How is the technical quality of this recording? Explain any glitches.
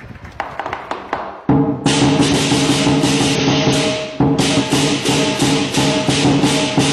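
The recording has three audible dropouts. Compressed frames skipped occur at 2.28–2.33 s, 3.35–3.41 s and 4.55–4.61 s: runs of roughly ten to fifteen frames, consistent with frames of about 46 ms, are missing or rejected as damaged, so the audio jumps ahead by about half a second, 0.4 s and 0.7 s.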